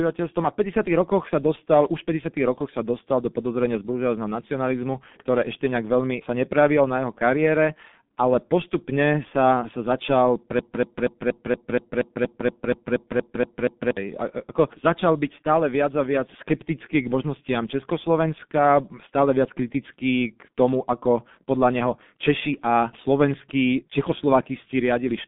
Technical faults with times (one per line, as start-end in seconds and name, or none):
0.00-25.27 G.723.1 codec
10.59-13.97 broken-record loop